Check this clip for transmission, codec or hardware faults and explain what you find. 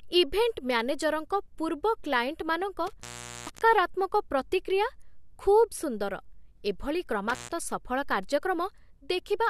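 A hardware fault shows up twice: intermittent contact, where a loose cable or plug briefly opens the signal path so the speech drops out with crackle at the edges. It happens from 2.87 to 3.62 s (open about 0.44 s) and from 7.29 to 7.51 s (open about 0.13 s).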